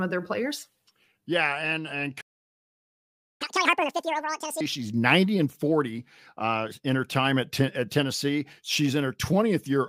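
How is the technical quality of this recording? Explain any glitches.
Two playback glitches interrupt the speech, one right after the other.

At 2.21 s, just after "and and", there is a playback stall: the audio drops to complete silence for about 1.19 s, until 3.42 s, and then resumes. The likely cause is the player running short of data or its thread being blocked, so nothing reached the output. Unlike a dropout, where a short piece of audio is lost and the sound skips ahead, this gap is long and the flow simply halts before picking up again.

From 3.42 s to 4.61 s comes catch-up at higher speed. The player is working through the backlog left by the stall, resampling it to play at 2.0 times normal speed. Because resampling changes speed and pitch together, the speech sounds rushed and squeaky, raised by about ten semitones, before it snaps back to normal. A time-stretch fault would speed things up at the original pitch, so the rise in pitch marks this as resampled catch-up. 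It also comes straight after the silence and lasts about as long as the stall did.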